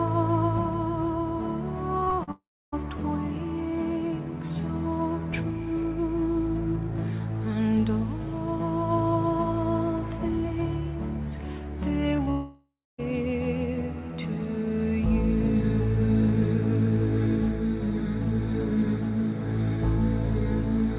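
From 2.0 to 2.29 s there is repeated packet loss with the robotic sound it brings: five small holes, the longest 38 ms, about 120 ms missing in all. Each hole is filled by stretching the last sound, so about 39% of that stretch is synthetic, heard as a choppy stutter. Unlike a single dropout, the audio keeps returning between holes. The band stops at 4 kHz throughout, which fits a G.711 call path at 64 kbps.

Straight after, from 2.31 to 2.74 s, comes what is likely a long network dropout. About 420 ms never arrives. The receiver carries the last sound on as a fading buzz or hiss, and for roughly 290 ms only silence remains before the audio resumes further on with the lost part gone. The tell against the choppy stretch before it is that one continuous gap collapses into quiet rather than flickering.

At 12.16 to 12.20 s and again at 12.24 to 12.29 s there is short concealed packet loss. 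Each time about 20 ms fails to reach the decoder in time and is patched by extending the preceding sound, then blended back. These are brief smears or wobbles that can swallow a short consonant-like transient, too short to fall silent.

A second likely network dropout follows from 12.31 to 13.0 s. About 680 ms is missing, the concealment fades out, and roughly 250 ms of silence precedes the return of the audio.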